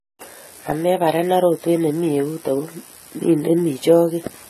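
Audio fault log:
Throughout, AAC compression: the speech sounds dull and smeared, with nothing above 14 kHz and a watery fizz on sibilants. That's likely a lean AAC-LC encode, pointing to roughly 32 kbps, where the encoder drops the top band and starves fine spectral detail.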